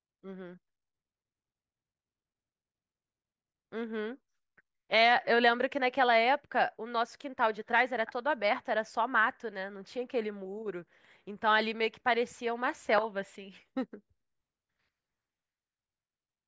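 Nothing in this speech recording stands out as a technical fault; there's no moment where anything breaks or goes wrong.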